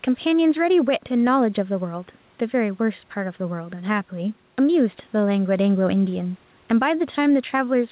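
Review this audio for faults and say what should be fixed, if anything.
Gain pumping runs throughout the clip: the gain swings by about 5 dB, flattening loud and soft passages. The likely cause is input gain set far too high, with a fast limiter or compressor repeatedly pulling it down. To prevent it, lower the microphone gain so peaks sit below the limiter threshold, and slow or disable the automatic gain stage.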